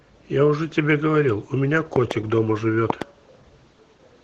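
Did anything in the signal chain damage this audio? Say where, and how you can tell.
Yes. At the codec stage, the speech went through Opus voice compression at a low rate, which fits roughly 16 kbps in hybrid mode. The whole clip sounds muffled and slightly hoarse and robotic, because the coarse linear-prediction excitation plus a thin upper layer can't carry the voice cleanly.

There are two loud pops, each a quick double pop. The first is at 1.96–2.13 s and the second at 2.90–3.04 s, each about 15 dB above the speech. The speech continues underneath. This most likely comes from analogue wiring: a voltage step from a loose plug or switch, shaped and briefly ringing through later circuitry.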